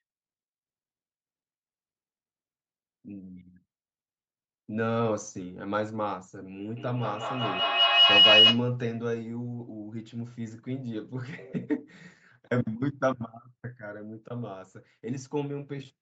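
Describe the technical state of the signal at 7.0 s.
At 7.0 s the signal is inside a feedback howl running from 6.76 to 8.71 s. A microphone is picking up a nearby loudspeaker carrying the same call, so each pass around that loop returns louder than the last. The repeats collapse onto the frequency the loop favours, a tone near 3 kHz that peaks about 12 dB above the speech, with repeats roughly every 200 ms, tracking the loop delay.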